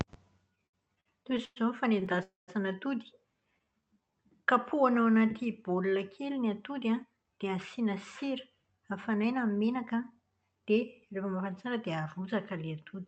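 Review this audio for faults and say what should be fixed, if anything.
Repeated stalls (stutter) run from 0.55 to 1.58 s and again from 2.00 to 2.19 s. Packets reached the receiver late or slower than playback, so its jitter buffer kept running dry. Each time it stretched the last sound until data arrived. The first stretch has nine stalls, the longest 110 ms, covering about 28% of that span. The second has four stalls of at most 17 ms. Nothing is lost, but the speech drags and stutters.

A call audio freeze follows from 2.23 to 2.50 s. The sound hangs on a held buzz that fades, with about 140 ms of silence, then resumes where it stopped, leaving a gap of about 248 ms with nothing missing. The likely cause is a delivery hold-up that emptied the jitter buffer, so the receiver invented sound to cover the wait and added that much delay.

A jitter buffer slow-down lasts from 3.40 to 4.96 s. 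The buffer was low or had just raised its target delay, so the receiver rebuilt its reserve by repeating single pitch periods and bits of pauses over and over. That adds 149 ms and plays the speech at 91% speed with unchanged pitch. Sounds are drawn out, with a slight warble in places.

Jitter buffer speed-up occurs from 6.74 to 8.32 s and from 8.77 to 10.70 s. The buffer held more audio than it aims for, and the receiver trimmed the excess delay by cutting out short pieces of one or a few pitch periods repeatedly. The speech runs at 106% and then 107% speed at the same pitch and sounds hurried. The cuts total roughly a tenth of a second in the first stretch and a bit more in the second.

All four come from uneven packet arrival, so the fix is to stabilise the network path, with steadier routing, less congestion and prioritised call traffic, and to give the jitter buffer a slightly larger, steadier target delay. 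Through the whole clip the Opus call path is audible as coding noise and a cut-off at 8 kHz, at a 48 kbps setting.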